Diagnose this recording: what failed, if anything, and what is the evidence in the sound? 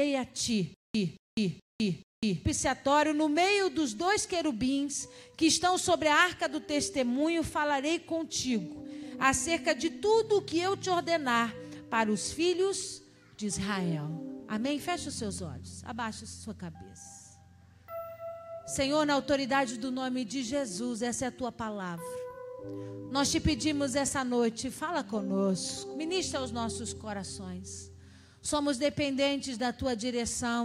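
Stutter with silent gaps from 0.74 to 2.45 s: one 225 ms burst recurs four times, each trailed by 203 ms of digital silence, a 428 ms period. A stalled playback buffer likely replayed its last fragment at each retry. The gaps rule out a seamless loop, and the repeats rule out plain dropouts.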